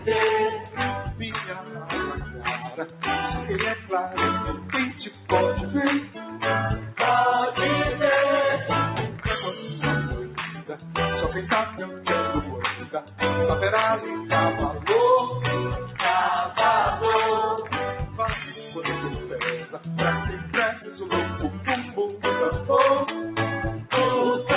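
From the start, a noise suppressor applied to music or sounds is working on material it was never tuned for. It treats sustained, steady content and decaying tails as background noise and pulls them down, while sharp onsets slip past largely intact. The gain it applies swings by roughly 10 dB, so the sound pumps, flutters or thins out, and decays are clipped short. All of this sits on top of a band-limited call path, with nothing above 4 kHz, consistent with G.711 mu-law at 64 kbps.

The deepest instances of sound cut by the noise suppressor come in eight stretches: 0.6 to 3.03 s (about 9 dB down), 4.56 to 5.29 s (about 7 dB), 6.03 to 6.92 s (about 9 dB), 9.09 to 9.25 s (about 6 dB), 10.24 to 12.06 s (about 9 dB), 12.77 to 13.2 s (about 8 dB), 19.16 to 20.99 s (about 8 dB) and 21.53 to 21.97 s (about 7 dB). In each, the suppressor misjudges steady or fading content as noise and ducks it harder than its surroundings, so the sound sinks in level or its decay is cut short.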